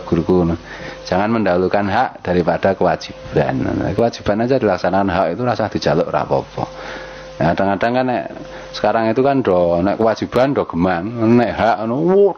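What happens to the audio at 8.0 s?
At 8.0 s, as throughout the clip, there is gain pumping: loud and soft parts are pulled closer in level, with a swing of around 20 dB, leaving it squashed. This likely comes from gain set far too high, with a fast limiter clamping every peak.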